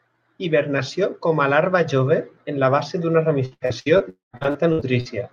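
From 0.24 to 1.75 s there is an automatic gain rise. The gain control judged the input too quiet. It raised its gain step by step, by about 6 dB in total. The speech and the background noise swell together over that second and a half. Nothing in the sound itself gets louder. The whole level simply creeps upward, then settles.

Between 3.45 and 4.02 s comes repeated packet loss, heard as robotic sound. Audio went missing in five short holes. The longest lasted about 83 ms. Each hole was patched by stretching the last sound forward. Nearly half of this stretch is patched rather than real. The speech turns choppy, with pieces clipped out.

From 4.10 to 4.35 s the sound breaks off almost completely. A brief fading buzz carries the last sound on. Then comes about 150 ms of silence. Speech resumes, but roughly a quarter second is gone for good. This is likely a long network dropout, where nothing arrived and the receiver could only fill in.

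From 4.37 to 5.09 s the repeated packet loss returns. There are six holes this time, the longest about 60 ms. About a third of this span is concealment. The robotic, broken texture comes back, a little less dense than before. All of this sits on top of the Opus call path, whose band stops near 12 kHz.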